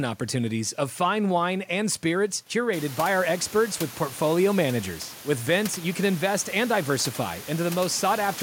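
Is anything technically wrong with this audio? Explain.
No, nothing technically wrong stood out on listening to this speech; the room's background noise climbs by about 21 dB at around two and a half seconds but stays about 17 dB below the speech, and it belongs to the recording space rather than the system.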